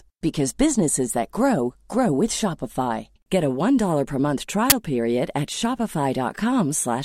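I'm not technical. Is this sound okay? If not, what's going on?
No. There is an uninitialised buffer fault at 4.70 s: a sudden, very loud burst of harsh digital noise lasting about 20 milliseconds. The player played a chunk of memory before any sound had been written into it, so leftover garbage data came out as noise.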